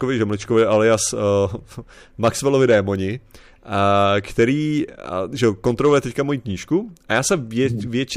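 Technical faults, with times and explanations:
0.57–0.95 s, hard clipping: brief crackle on the loudest syllables, as peaks overdriven by about 2 dB are cut flat, adding high harmonics.
2.24–2.76 s, hard clipping: harsher fuzz across the loud parts, since peaks exceed the stage's limit by about 5 dB and are flattened.
5.44–5.98 s, hard clipping: after "a že" and before "teďka moji knížku a", gritty distortion on peaks, squared off by about 4 dB of overload.
7.12–7.66 s, hard clipping: after "teďka moji knížku a", light crackle on peaks, flattened by roughly 2 dB of overdrive, spraying high-frequency harmonics.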